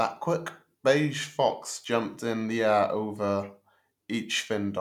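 No technical faults can be heard in this recording.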